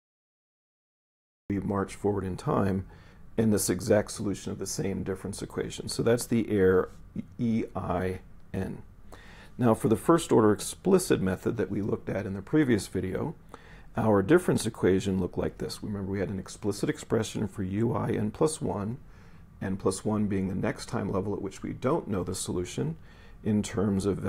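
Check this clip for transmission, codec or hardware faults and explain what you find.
There's one fault here, and it's right at the top: a cut-off start. The clip sits in dead digital silence from 0 to about 1.50 s, then the sound comes in abruptly mid-stream at 1.50 s, with no attack or fade leading into it. That's what you get when capture or the stream kicks in late. Whatever was already playing just gets chopped, so you're dropped into the middle of it rather than hearing it begin.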